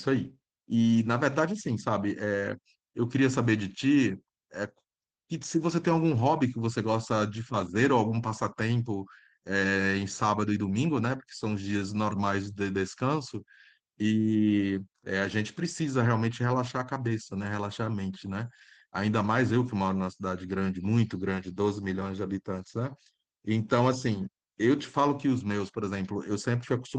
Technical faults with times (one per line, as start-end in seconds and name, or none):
0.00-26.99 Opus voice compression